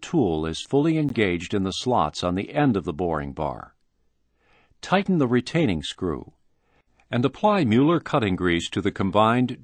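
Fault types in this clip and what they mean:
Block of digital silence: at 1.09 s the audio drops to silence for about 15 ms and then resumes, with no fade either way. The short hole is heard as a brief tick.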